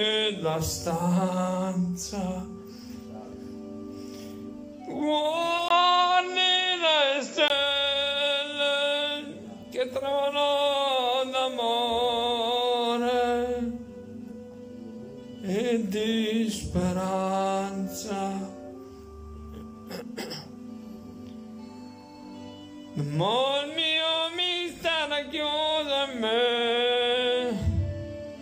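At 5.68 s, after a 20 ms gap, the sound dulls, with nothing above 7.6 kHz, a modest level shift and faint new background noise, until 7.50 s. Tone, level and noise changing together, not bandwidth alone, likely mean an input switched to a poorer device.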